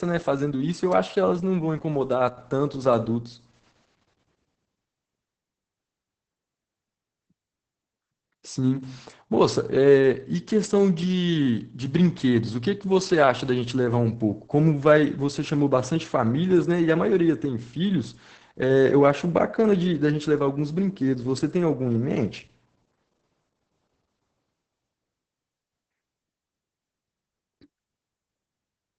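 Opus voice compression runs throughout the speech. The damage is heavy and consistent with a low bitrate of around 10 kbps. The sound points to the SILK linear-prediction coder working alone in wideband, so nothing survives above about 8 kHz. With so few bits, the excitation signal is coded coarsely, which leaves the speech muffled and hoarse, with a slightly robotic edge, and any background sound comes out burbling.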